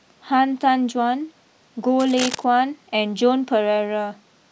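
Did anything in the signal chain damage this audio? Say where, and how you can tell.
Yes. From 1.99 to 2.44 s, just under half a second, a dense, uneven scratching and rustling sits on top of the speech, at roughly ten decibels below it. This is cable scratch noise, and it points to the analogue wiring stage. The likely cause is a worn cable, connector or control being moved, so that its contact resistance jumps around rapidly and injects ragged bursts of noise until the contact settles.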